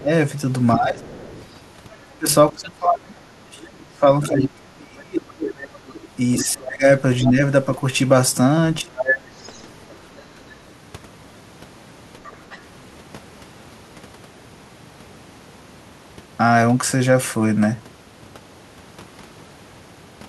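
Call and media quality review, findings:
Speech suppressed in double talk, 0.00–7.38 s, plus 8.81–9.09 s and 10.21–10.26 s. Talker's level dips while the far side speaks, deepest drop roughly 30 dB over about four seconds in the first stretch, roughly 25 dB and 10 dB in the brief later ones. Likely echo canceller unable to separate near talker from loudspeaker echo during overlap, so it attenuates both rather than risk passing echo.

Other side's voice leaking through, 1.02–2.68 s, 3.67–7.31 s, 8.97–10.51 s, 12.24–12.58 s. Second voice audible under the talker, faint at first (about 25 dB below speech), rising to about 10 dB below, then about 5 dB below near 9–10 s, faint again at 12.24 s. Likely incomplete echo cancellation: loudspeaker playback of the far end reaching the microphone and surviving the canceller's residual suppression.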